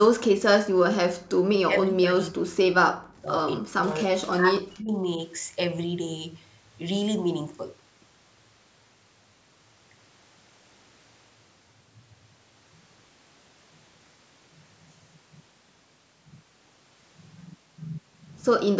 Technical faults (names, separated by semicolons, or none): speech suppressed in double talk